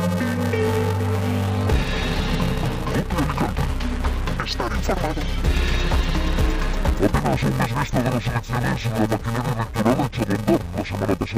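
Interleaved audio read as planar runs throughout the clip: alternating left and right samples in each very short block, about 2.9 ms and consistent with 128 samples, are split into halves, so the audio sounds dull and robotic with a steady 345 Hz buzz and no clear octave drop.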